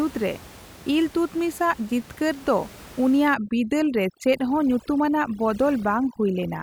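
From 3.34 s to the end at 6.63 s, overdone noise removal suppresses bands near the noise estimate, so the room noise, about 21 dB below the speech, drops and breaks up into twinkling specks.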